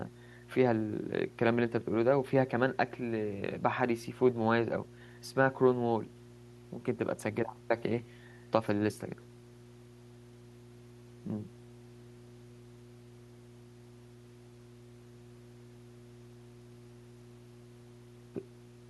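Mains hum runs under the speech from start to finish. A steady low tone sits at 60 Hz, around 20 dB below the speech. Power-line current is leaking into the signal path, probably through a ground loop or a nearby transformer.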